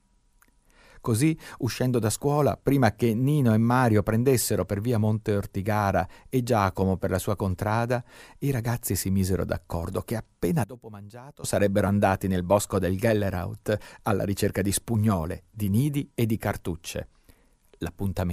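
Between 10.64 and 11.44 s, right after "misero d'accordo che appena", the speech suddenly falls by about 18 dB and comes back at "sarebbero andati nel bosco". The likely cause is one channel inverted: with one side's polarity reversed, what both channels share cancels when they are summed to mono. Unlike a dropout, the sound never goes fully silent; a reduced residue of the mismatch between channels remains audible throughout the span.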